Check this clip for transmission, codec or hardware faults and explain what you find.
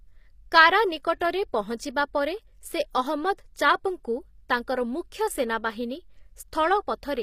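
One codec fault runs through the whole clip. The treble of the speech sounds gritty and metallic, with s sounds turning lispy, and nothing at all comes through above about 15.5 kHz. This is likely HE-AAC compression at a low bitrate, consistent with roughly 24 kbps. Only the lower spectrum is coded, and the upper band is rebuilt by copying lower bands upward under a coarse envelope. Harmonics therefore misalign across the crossover, and that mismatch is what produces the grit.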